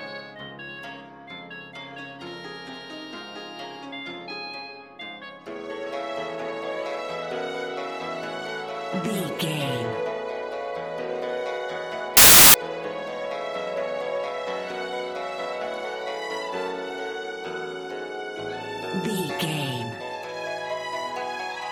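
A reader assembling samples from the wrong bytes, shifted by a byte or with the byte order swapped, produces samples built from the wrong bytes between 12.17 and 12.54 s. The rapidly changing low bits take over each value, so the audio becomes loud, harsh broadband noise.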